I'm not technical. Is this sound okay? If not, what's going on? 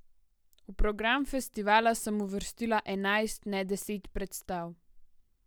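Yes, nothing technically wrong is audible here; the speech holds steady throughout with no faults to report.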